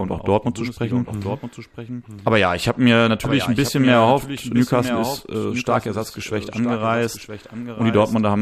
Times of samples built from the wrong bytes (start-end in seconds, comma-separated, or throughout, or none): none